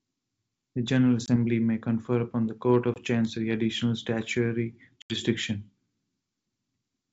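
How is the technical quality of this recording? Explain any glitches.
Three glitches interrupt the speech, each a sudden dropout followed by a rough recovery. The wideband sound around them, with its faint upper-band hiss, fits G.722 coding in its full 64 kbit/s mode.

At 1.26 to 1.36 s and 2.94 to 3.01 s, brief 20 ms holes, about one packet each, cut the speech. At 5.02 to 5.21 s a longer 80 ms gap, around four packets, does the same. This is packet loss on an ADPCM call. After each silence the speech returns slightly distorted until the decoder's adaptive predictor and step size resynchronise with the sender's.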